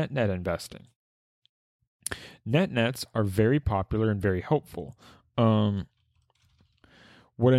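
No technical faults are audible anywhere in this speech recording; the signal stays continuous and stable throughout.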